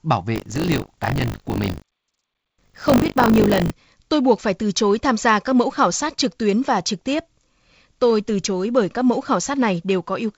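From 0.34 to 3.71 s, the program filling the playback ring buffer and the hardware draining it have slipped out of step, so the read position crosses the write position within every period. The result is buffer tearing. A small slice of each buffer, roughly a sixth, carries speech from about 40 ms earlier, joined by hard edges. Those repeating splices form a robotic rattle at 50 Hz, pointing to a 20 ms period. The rattle rides on the G.722-coded speech, which is clear up to about 7 kHz.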